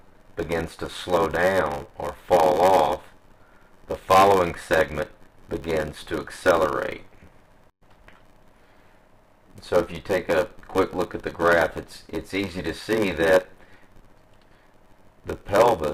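A steady buzz near 94 Hz runs through the whole clip. This is a block size mismatch (padded): short blocks are zero-filled to fit what sounds like 512-sample reads, slowing the audio to 0.861× with its timbre intact. The waveform shows regular gaps, and the spectrogram shows evenly spaced vertical stripes.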